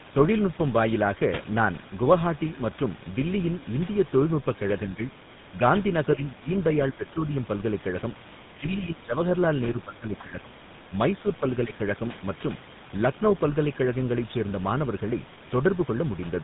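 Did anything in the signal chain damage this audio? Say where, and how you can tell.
Yes. At the codec stage, tandem speech coding runs through the whole clip: the sound is rough, muffled and warbly, with nothing above 3.8 kHz. Three speech coders in a row, pointing to CVSD then GSM full rate twice, each re-encode the previous one's artefacts.

In call processing, the speech dips by roughly 10 to 15 dB at 4.87–5.03 s, 6.16–6.49 s, 9.74–10.56 s and 11.66–11.73 s. This is likely speech suppressed in double talk, where the echo canceller mistook overlapping far-end activity for echo and attenuated the talker.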